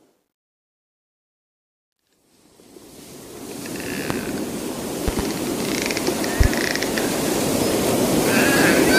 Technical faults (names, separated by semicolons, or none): loud pop